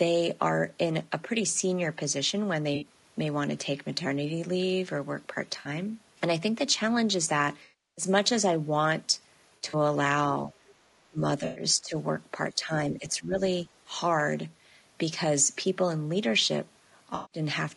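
Across the whole recording the speech sounds rough and grainy, with a hiss filling the gaps between harmonics and a thin, synthetic top end. That is plainly audible low-delay AAC compression, likely AAC-ELD at a low rate around 32 kbps, where very short frames cannot resolve pitch harmonics cleanly and leave too few bits for the upper band.

Short smeared, noisy patches break in at 2.75 s and 5.59 s, each about 60 ms. A longer one from 7.63 to 8.05 s decays toward silence before recovering. A fluttery, scattered stretch runs from 9.49 to 9.75 s, with its longest gap around 70 ms. These are AAC frame loss with concealment: the decoder rebuilt missing audio from the last good spectrum, and the longest gap outlasted that and faded out.

From 10.47 s the speech repeatedly dips or drops out in pieces, at 10.47, 11.09, 11.74, 12.53, 12.94 to 13.37, and 13.66 s, sinking by roughly 10 dB and at worst about 25 dB. 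This is speech suppressed in double talk, likely an echo canceller that could not separate the talker from the far side's loudspeaker echo and turned both down.

Between these dips, another frame loss with concealment smears the sound around 11.45 to 11.63 s, about 100 ms. A final one at 17.15 to 17.39 s lasts about 160 ms.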